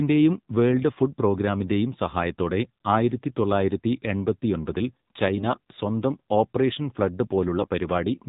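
Speech heard through a narrow, buzzy, synthetic filter, with nothing above 4 kHz and a clearly processed edge throughout: this is the AMR narrowband mobile codec, and the degree of buzz points to a low mode around 7.4 kbps, where few excitation pulses per subframe are left to drive the vocal-tract model. From 5.36 to 5.59 s, between "സഹായത്തോടെ ആയിരത്തി തൊള്ളായിരത്തി എൺപത്തിയൊമ്പതിൽ" and "സ്വന്തം ഓപ്പറേഷൻ ഫ്ലഡ്", the voice turns hoarse and gargly, and again more briefly from 7.58 to 7.68 s after "സ്വന്തം ഓപ്പറേഷൻ ഫ്ലഡ്", while pitch and level hold. These are AMR bit errors. A weak link flipped a few percent of the frames' lightly protected bits, so pulse positions and fine gain and spectral values decoded wrongly.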